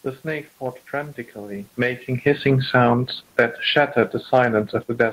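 From 2.14 to 2.91 s, the automatic gain control judged the input too loud or its background noise too strong and pulled its gain down, so the speech and room noise sink together by about 6 dB.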